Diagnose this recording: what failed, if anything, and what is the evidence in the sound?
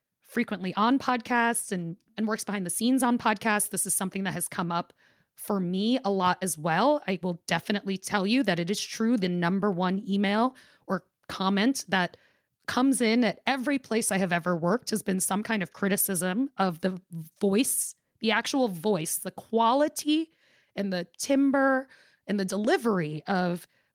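Nothing failed; no fault is audible in this recording.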